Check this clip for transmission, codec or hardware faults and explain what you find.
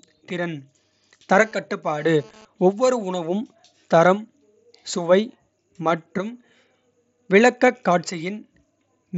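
Two faults stand out in this speech, which reaches the ear through a Bluetooth mSBC headset codec whose wideband path tops out at 8 kHz with a light grain on loud sounds.

GSM phone buzz, from 1.42 to 2.45 s: a 2G handset nearby was sending radio bursts about 217 times a second, and the audio circuitry rectified those pulses into the signal path. The result is a hard, raspy buzz at 217 Hz with a dense stack of harmonics, sitting about 28 dB under the speech and unrelated to it. Its stop-start character, arriving and then vanishing after about a second, suggests the phone was moving data rather than holding a call.

Concealed Bluetooth headset packet loss, at 7.67 s: a single voice packet between headset and phone went missing, leaving a gap of 7.5 ms. The receiver filled it by carrying the waveform forward with the closest-matching stretch of the preceding audio. Because the loss is isolated and brief, the patch is nearly inaudible.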